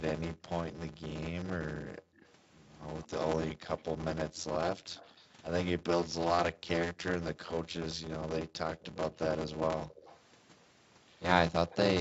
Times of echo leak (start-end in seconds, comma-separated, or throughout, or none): 2.16-6.06, 9.89-10.20, 11.70-11.76